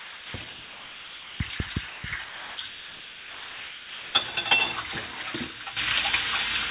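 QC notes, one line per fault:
0.00–0.34, 0.50–1.40, 1.58, 1.88–2.04, 2.24–2.58, 2.68–4.14 and 5.64 s, sound dropped by the voice detector: the sound gives way to smooth comfort noise, likely because the detector judged it background. It returns at its original level, unlike a level change.
5.77 s to end, sudden gain jump: sound and background noise jump together by about 12 dB in one step and stay there, likely a gain change applied with no ramp rather than a dropout.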